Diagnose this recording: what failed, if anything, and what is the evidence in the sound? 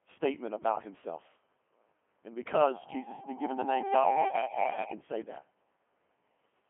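The codec stage is the culprit here: the whole thing has run through a Codec 2 vocoder. Every syllable comes out robotic and buzzy, because the decoder rebuilds the speech from sine waves using only pitch, voicing, energy and a spectral envelope; the original waveform never made it across. The band sits at roughly 200 Hz to 3.4 kHz with nothing above 3.5 kHz, and the damage is heavy, which fits a 2.4 kbit/s mode.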